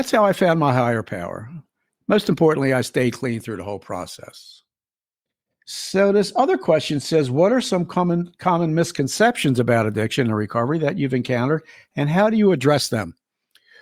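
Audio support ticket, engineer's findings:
Jump at 3.40 s in the speech, between "importantly I stayed clean" and "through the whole process". Symptom: tiny forward jump, no silent gap. Likely component: capture driver, dropped buffer (overrun). Samples overwritten before the read, so a very short slice, a millisecond or two, is lost and the edges butt together. Distinguishing point: a dropout or underrun would leave a hole of silence or a repeat. Here the waveform simply skips ahead.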